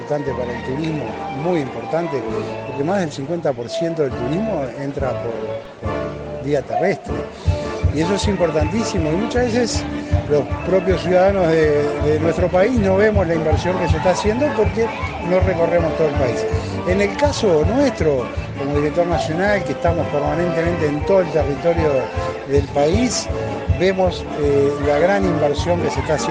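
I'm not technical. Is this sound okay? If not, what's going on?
No. There is a DC step at 5.65 s, heard as a single low thump. At that moment the waveform's resting level, the line it swings around, suddenly jumps up or down, much as it would if a converter recalibrated or an input carrying a built-in offset were switched in. That abrupt jump is what you hear as the thump. The shifted level then fades back gradually rather than holding, while the sound itself carries on unchanged.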